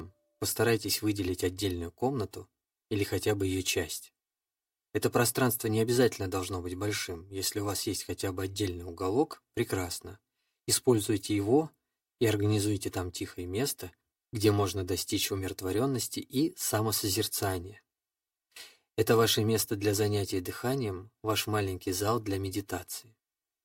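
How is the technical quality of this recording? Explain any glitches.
The recording has a fault that runs through the whole clip: channel delay, producing comb filtering. One channel arrives roughly 3 ms behind the other, and when the two are summed to mono, everything they share cancels at a series of evenly spaced frequencies, starting around 200 Hz. The result is a set of fixed notches across the spectrum, so the speech sounds hollow and phasey from start to finish, with a thinned, slightly tunnel-like tone.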